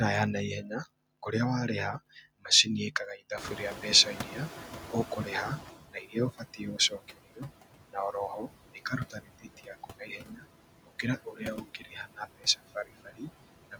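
The whole clip shows noise suppressor artifacts: background noise is pulled down about 17 dB frame by frame, so it ducks between words and rises under them. From 3.37 to 5.8 s, right after "kũrĩa warĩha macini ĩkaga", the room noise jumps about 22 dB. The noise suppressor is catching up, so the noise leaks through for about 2.4 s before the estimate settles and it drops by about 15 dB. Then there's speech cut by the noise suppressor at 5.93–7.5 s (just before "na oroho"), 9.1–10.45 s, 10.86–11.42 s, 11.64–12.2 s and 12.75–13.28 s. Quiet bits get mistaken for noise and dip by roughly 12 to 18 dB, so they sound swallowed and faint.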